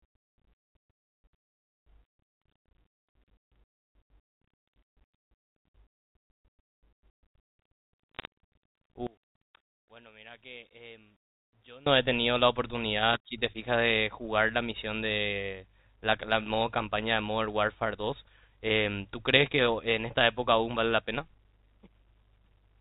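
From 8.15 to 8.25 s, the G.711 mu-law stream carrying this speech suffers bit errors on a digital phone line. A small fraction of bits arrive flipped, and because each 8-bit code word stands for a single sample, every error knocks that one sample to a wrong value. The clicks come in a short cluster, which points to a handful of frames being hit, and sound as brief crackle over speech that is otherwise intact.

From 9.07 to 11.86 s the speech drops by about 25 dB and turns faint. The likely cause is one channel inverted: with one side of a stereo pair in reversed polarity, a mono fold-down cancels everything the two channels share, including the centred voice and the background. What survives is only the small difference between the channels, a faint residue of the speech, until normal level returns at 11.86 s.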